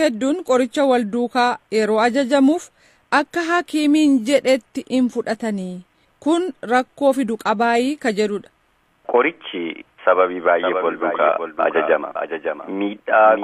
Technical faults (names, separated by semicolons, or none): doubled audio track